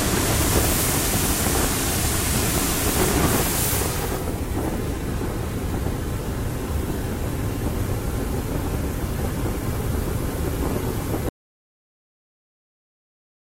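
At 11.29 s the sound cuts off abruptly and the clip stays silent for its last 2.2 s, with no background or room tone. This audio dropout to silence likely comes from the input signal being lost while recording continued.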